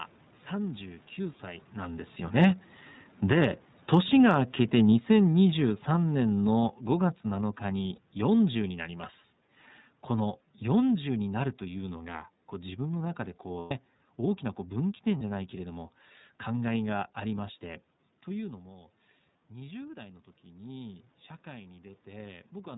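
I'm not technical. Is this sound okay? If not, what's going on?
No. The whole clip has passed through the iLBC codec, a phone-call compression method. It cuts off all sound above 4 kHz, so the speech sounds narrow, slightly rough and synthetic.

From 2.25 to 17.04 s there is automatic gain falling. The call system decided the sound was too loud and slowly turned it down, so speech and background both sink.

There are also lost iLBC frames, where bits of the call went missing. The gaps are at 7.95 to 7.99 s, 13.59 to 13.72 s and 15.18 to 15.21 s. Each one is filled with a short, buzzy, held sound. The middle gap is the longest.

From 15.56 to 22.73 s there is automatic gain rising. The system now turned the level back up, so the sound gradually swells again.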